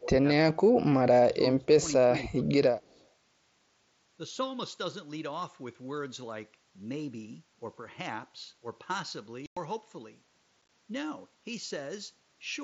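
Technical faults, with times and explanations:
0.00–0.09, 1.29–1.68, 2.31–2.56 and 2.84–3.04 s: speech suppressed in double talk. The voice dips by roughly 10 to 15 dB in short patches, likely the echo canceller turning down speech while both sides talked.
2.82–3.05 s: echo leak. A very faint copy of the voice trails about 0.2 s behind, around 40 dB down, likely loudspeaker echo the canceller failed to remove.
9.46–9.57 and 10.62–10.69 s: unconcealed Bluetooth headset packet loss. First one solid 105 ms hole, then a rough, chopped stretch of brief dropouts. Lost headset packets were replaced by silence or an idle pattern, leaving abrupt edges.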